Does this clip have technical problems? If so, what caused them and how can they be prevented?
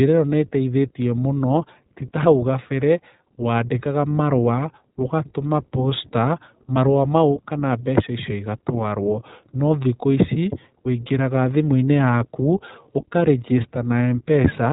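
Yes, iLBC codec coding runs throughout. Each 20 ms frame is coded independently, giving rough, synthetic speech; a spectrogram shows nothing above 3.8 kHz, and the bitrate is near 15 kbps. Use a wideband codec such as Opus for recording or transmission instead.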